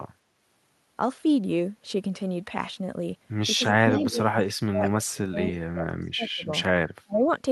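A speech recording with two kinds of fault. From 3.58 to 6.48 s the voice repeatedly dips and drops out in pieces, about 2 s in total, at worst by about 35 dB. It happens again from 7.02 to 7.27 s, for roughly 0.3 s. This is speech suppressed in double talk. The likely cause is an echo canceller that could not tell this talker from loudspeaker echo while the far side spoke, so it turned everything down. Inside the first stretch, from 3.93 to 4.1 s, a faint second copy of the voice appears. It trails the original by 271 ms and sits about 20 dB below it. This is an echo leak. A loudspeaker on the far end likely fed the voice back into its microphone, and that end's canceller let a scrap of it through.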